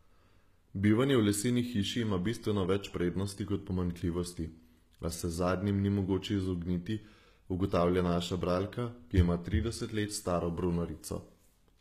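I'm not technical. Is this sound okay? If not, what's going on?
No. From start to finish the speech has the sound of HE-AAC compression, likely from being squeezed into a very small file. The top of the sound isn't lost. It's faked: the encoder keeps the lower tones and copies them upward to stand in for the highs, cutting off entirely near 15 kHz. That's what separates it from a plainly muffled recording. It still sounds bright, but s sounds come out gritty, metallic or lispy because the copied highs don't match the real voice.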